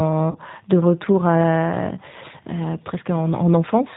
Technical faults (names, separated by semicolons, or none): G.729 codec; VoIP packet loss concealed by the speech codec